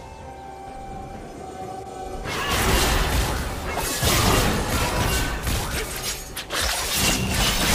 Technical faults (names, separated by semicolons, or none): none